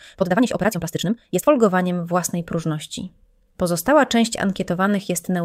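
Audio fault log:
0.0–1.5 s, time-stretched section: the opening runs at double pace, rushed, yet the pitch never shifts. Most likely software squeezed this stretch to fit a length, dropping short slices to hold pitch, before the pace snaps back to normal.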